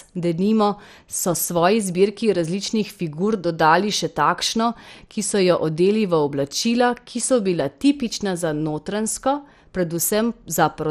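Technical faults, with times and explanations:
Throughout, MP2 compression: the speech sounds dull, with a gurgling, granular roughness and nothing above 14.2 kHz. A plain low-pass filter would leave the remaining bands clean, but here they are coarsely quantised, likely from MP2 encoding at a rate around 64 kbps.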